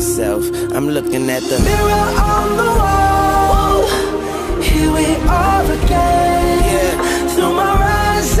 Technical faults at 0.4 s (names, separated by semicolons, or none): none